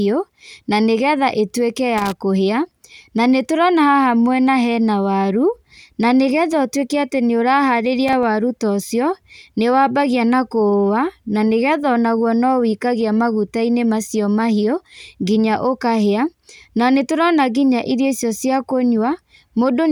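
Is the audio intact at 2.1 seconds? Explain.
No. Loose connector crackle runs from about 1.98 s to 2.17 s, so the speech at 2.1 s falls inside it. A worn or dirty contact somewhere in the signal chain is momentarily losing and regaining connection as it shifts, chopping the audio on and off in quick succession, while any DC sitting on the line turns each break into a pop. For roughly a fifth of a second this comes through as a ragged, irregular scratching crackle over the speech.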